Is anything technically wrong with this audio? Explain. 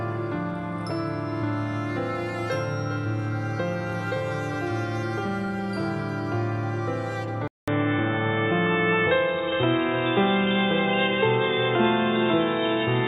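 Yes. At 7.48 s the input likely switches to a poorer device, such as a second microphone or a headset's call profile, and it stays there to the end. The new path carries nothing above 3.8 kHz, so after a 200 ms silence at the switch the sound turns dull and boxy. The level shifts by a few decibels, and a new, faint background noise appears, sitting far below the signal.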